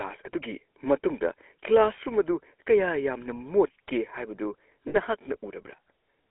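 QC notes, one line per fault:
Throughout: GSM full-rate codec. The vocal tract is modelled and excited by regularly spaced pulses, so the fine detail of the speech is thinned out. The result is a plainly audible buzzy, gravelly roughness in a band of 300 Hz to 3.5 kHz, consistent with 13 kbps GSM.
4.88–4.96 s: lost GSM frames. Bad frames were filled by repeating the last good frame's settings. That holds the sound as a short rough, metallic ring for about 60 ms, which points to three consecutive frames lost.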